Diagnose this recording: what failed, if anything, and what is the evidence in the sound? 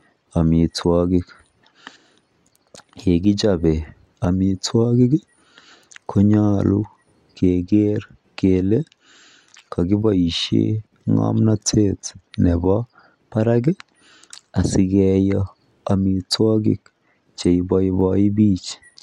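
Nothing failed: no stage from the analogue wiring through to playback leaves any audible fault in this speech recording.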